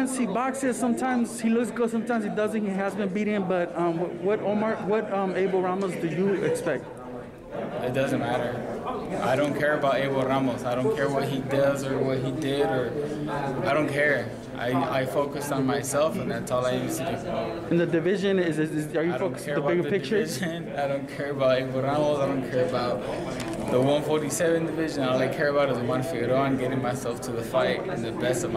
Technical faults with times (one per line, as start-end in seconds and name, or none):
none